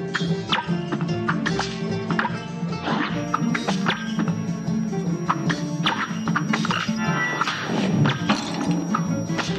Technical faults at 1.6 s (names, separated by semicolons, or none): none